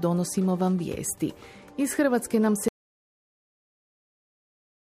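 At 2.68 s the sound cuts off abruptly and is replaced by silence, with no room tone, lasting to the end of the clip. This audio dropout to silence likely comes from the input being lost while recording continued, writing silence.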